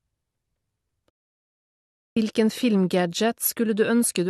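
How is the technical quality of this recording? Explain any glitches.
The recording has one clear fault, a playback stall. From 1.10 to 2.17 s, the player likely ran out of data or was blocked, so the speech cuts out mid-flow for about 1.07 s of silence before continuing.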